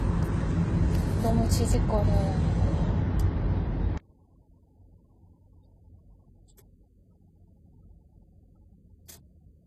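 From the very start the sound has a layered, smeared coarseness, with swirly, watery artefacts on top of a duller, blocky graininess. This points to transcoding between lossy codecs, likely an MP3 at a low rate, around 35 kbit/s, re-encoded as HE-AAC at around 20 kbit/s. Each stage adds its own damage, and the second spends its scarce bits on the first stage's flaws. On a spectrogram nothing appears above 14.9 kHz, with patchy, holed textures below that edge.

At 3.98 s, and through to the end, the sound suddenly hollows out. Heard in mono, the level falls by about 28 dB, leaving a faint remnant. This is the sign of one channel inverted, likely a polarity flip on one side, so the shared content cancels when the channels are summed. On a waveform view the trace collapses to a near-flat line from that point.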